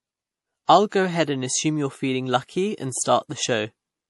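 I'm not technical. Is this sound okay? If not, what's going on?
No. Across the whole clip the speech sounds dull and watery, with nothing above about 11.4 kHz. This points to MP3 compression as the likely cause. Unlike a simple muffled recording, the loss of detail shifts and swirls from moment to moment.

There is also pre-echo from about 0.89 to 0.92 s, just before "ahead and assume you". A brief hiss, roughly 29 ms long, arrives before the sound starts. Background noise or a click would not sit only in front of that onset like this.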